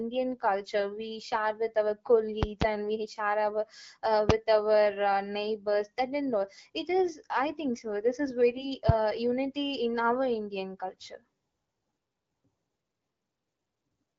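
At 2.43 to 2.64 s, just after "we share with our" and before "and we share", two sharp pops land in quick succession over the speech, roughly 25 dB above it. A single loud pop follows at 4.29 to 4.32 s. Both are likely voltage pulses from a switch, plug contact or static discharge, while the speech and its light AMR-WB coding carry on underneath.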